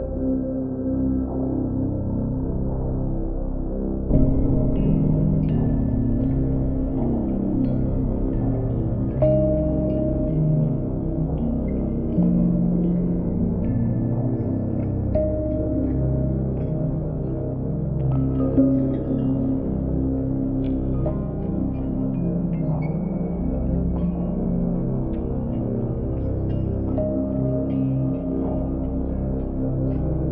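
No technical fault can be heard anywhere in the audio. There is nothing that needs a time or a cause.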